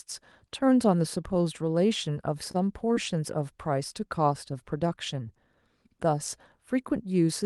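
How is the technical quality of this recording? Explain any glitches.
The speech has two brief network glitches, both close together near the three-second mark. It came through a call path whose top end stops near 12 kHz, consistent with an Opus call codec.

From 2.51 to 2.56 s there is a short stall from a late packet. A packet arrived after it was due, and the jitter buffer ran dry. The receiver stretched the last sound for about 28 ms until the packet turned up. Playback then resumed from the same point. Nothing is lost. Everything after it is simply about 28 ms later. You hear one sound held a touch too long, with a faint buzz.

From 2.94 to 2.98 s there is a short concealed packet loss. About 20 ms of audio never reached the decoder. The receiver covered the gap by extending the preceding sound for about 17 ms, then blended back into the real signal. Here material is actually missing, not just delayed. 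It comes across as a quick smear or wobble.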